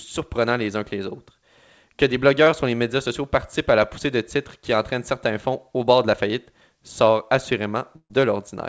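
At 2.44 to 2.48 s, just before "sur les médias sociaux", the speech briefly smears or wobbles. This is short concealed packet loss: about 20 ms of audio arrived too late, and the decoder bridged the hole by extending the preceding sound before rejoining the real signal.

From 7.96 to 8.12 s, the speech turns into a held, fading continuation and then drops out for about 60 ms before resuming further on. This is a burst of packet loss: roughly 140 ms went missing, and a gap of about 137 ms was filled by stretching and attenuating the last sound. The call's G.722 coding at 64 kbps, with nothing above 8 kHz, shapes the tone of both gaps.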